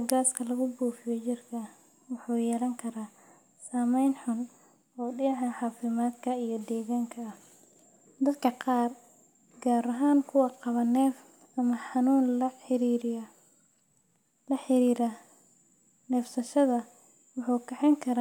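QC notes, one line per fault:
No faults found on this speech clip; nothing to log.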